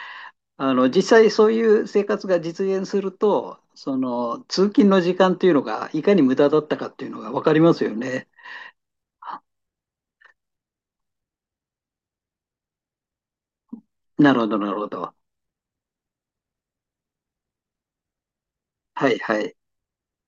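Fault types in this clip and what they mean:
No technical faults can be heard in the speech; the signal stays continuous and steady throughout.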